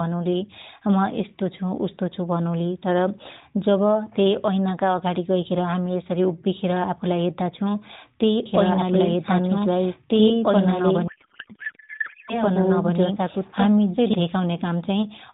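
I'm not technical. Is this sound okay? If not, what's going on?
No. From 8.46 s to 14.14 s there's a doubled audio track: the same speech plays twice, with a second copy roughly two seconds behind and about as loud as the first, so the two talk over each other. The copy has no echo or room sound and it starts and stops abruptly, which points to the audio likely being picked up a second time through a slower route, or to an editing slip that left two copies out of step.

Inside that stretch, from 11.08 s to 12.39 s, there's a codec payload misread. The speech comes through a phone-style mobile codec, and here the two ends disagree about how its data is packed. The receiving side reads each chunk with the pieces in the wrong places, so the speech is replaced by garbled noise and a wobbly warble that barely tracks it. It clears up at 12.39 s, once both sides are reading the data the same way again.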